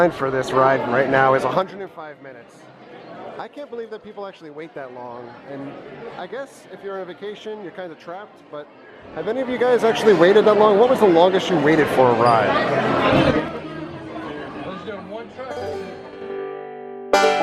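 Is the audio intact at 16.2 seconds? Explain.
No. Zipper noise runs from 16.04 to 16.38 s: a roughly 20 dB level change made in 4 dB jumps, about ten per second, ticking audibly. It appears as stair-stepped waveform envelopes and thin vertical spectrogram lines.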